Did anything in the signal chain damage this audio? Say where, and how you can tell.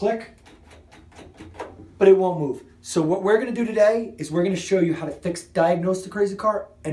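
No, nothing in the signal chain stood out on listening.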